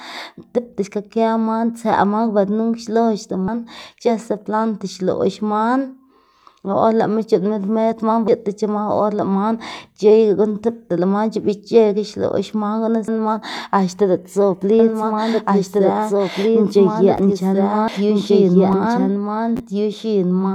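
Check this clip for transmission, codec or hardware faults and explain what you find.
Two faults are audible. At 3.48, 8.28, 13.08 and 17.88 s the speech skips abruptly, losing roughly a fifth of a second each time. This is audio missing between chunks, likely from 5-second chunks dropping a sliver at each handover.

From 14.79 s to the end, a second full-strength copy of the speech runs about two seconds behind, dry and starting abruptly. This is a doubled audio track, likely a slower capture path mixed in alongside the original.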